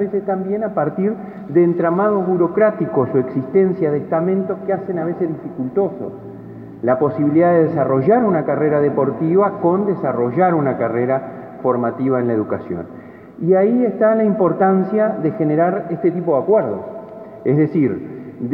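Nothing in the audio stood out as a technical problem on listening.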